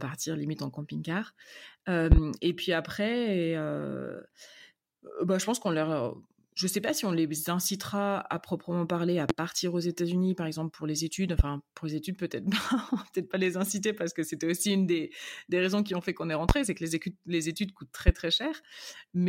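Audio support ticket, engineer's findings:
Loud pops over the speech, which carries on underneath. A double pop at 2.12–2.20 s, then single pops at 9.30–9.33, 11.39–11.43, 16.49–16.53 and 18.08–18.12 s, about 20–25 dB above the signal. Likely a plug, switch or static glitch injecting voltage spikes that the downstream circuitry turns into sharp thumps.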